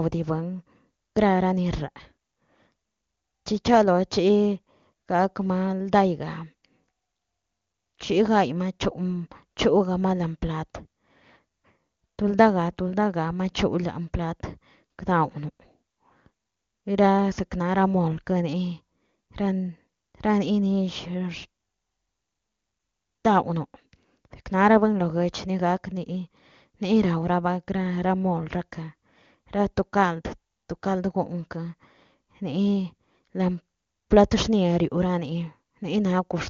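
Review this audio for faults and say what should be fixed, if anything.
Nothing stood out on listening to this speech, which comes through AMR wideband (HD Voice) coding at 23.85 kbit/s with its bandwidth topping out around 7 kHz, so there is nothing to fix.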